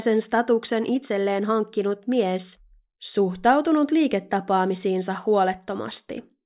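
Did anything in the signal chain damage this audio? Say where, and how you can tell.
No, nothing in this speech stood out on listening as damage introduced anywhere along the signal chain.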